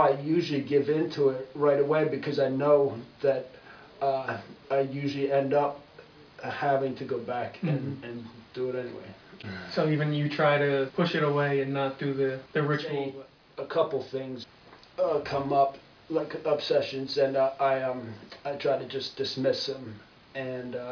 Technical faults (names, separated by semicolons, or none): none